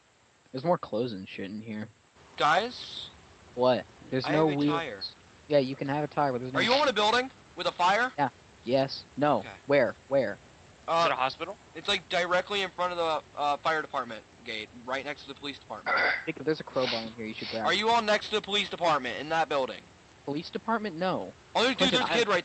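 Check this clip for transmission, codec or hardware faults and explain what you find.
There's one real fault here, a short concealed packet loss at about 16.37 to 16.41 s. Roughly 20 ms of audio didn't arrive in time, so the receiver papered over the gap by stretching out whatever it had just played, tracking its pitch or filling with shaped noise, then faded back into the real signal. You hear it as a quick smear or tiny wobble, and a brief sound right there could simply drop out. The call path itself sounds like Opus at a moderate bitrate, around 40 kbps, with the top end cut at 8 kHz.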